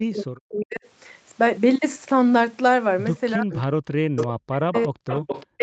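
A speech recording of a call, band-limited to nothing above 8 kHz by the call's microphone path. The main fault is speech suppressed in double talk. The voice sinks or breaks up from 0.0 to 0.85 s, 3.36 to 3.52 s, 4.0 to 5.25 s, and from 5.57 s to the end. The deepest dips reach about 40 dB. The likely cause is an echo canceller that heard both parties at once and turned everything down. There is also echo leak. A delayed copy of the voice returns about 361 ms late at 3.52 to 3.66 s, 4.16 to 4.26 s, 4.74 to 4.84 s and 5.09 to 5.46 s. It sits roughly 5 to 15 dB below the speech. Loudspeaker sound has likely slipped past the canceller and been sent back.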